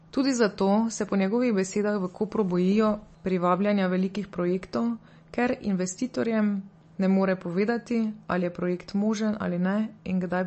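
Throughout the clip, the speech sounds watery and swirly, with plainly audible damage. Nothing is heard above 8.3 kHz. The likely cause is MP3 compression at a low bitrate, around 34 kbps, which strips the treble and lets weak frequency detail flicker on and off.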